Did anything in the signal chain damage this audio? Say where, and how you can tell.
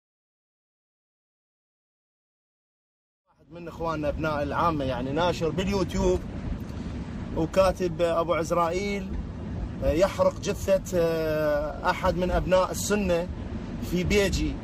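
No, nothing in the signal chain damaged this audio.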